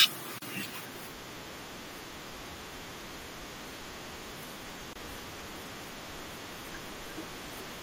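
Right from the start the speech has a watery, swirly quality, with sibilants turning a bit metallic and consonant onsets smeared. That's the sound of MP3 compression starved of bits: the treble is cut off and weak frequency lines flicker in and out between frames. The damage is plainly audible, and it's likely down to MP3 encoding at a bitrate around 64 kbps.

At 0.38 s a short hole, about 36 ms long, drops into the sound, and a second one of about 24 ms opens at 4.93 s. Both are gaps at a join of encoded pieces. The sections were encoded separately and stitched together without trimming the encoder's leading delay and final-frame padding, so silence sits at each seam. The edges are smeared, and the sound picks up exactly where it left off.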